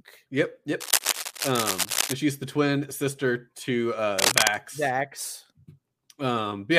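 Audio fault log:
0.80–2.13 s and 4.18–4.54 s, cable scratch noise: dense, uneven bursts of scratching ride over the speech, roughly level with it in the first stretch and somewhat louder in the second. This likely comes from a worn cable or connector being moved, its contact resistance jumping rapidly.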